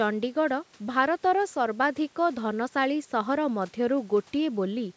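No technical faults can be heard in this speech.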